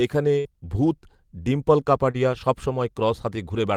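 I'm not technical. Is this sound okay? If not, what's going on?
No. At 0.39 to 0.47 s, just before "ভূত ডিম্পল", there is a burst of packet loss. About 60 ms of speech never arrived. The receiver stretched the last sound for about 54 ms and faded it, then jumped ahead past the missing piece.

At 2.11 to 2.16 s, right after "এখানে ভূত ডিম্পল", there is a short concealed packet loss. About 40 ms went missing. The receiver patched roughly 33 ms by continuing the previous sound, then blended back, leaving a brief smear where a small sound may drop out.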